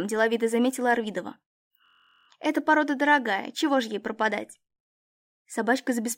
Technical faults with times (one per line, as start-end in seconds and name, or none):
1.86-2.28 system hang loop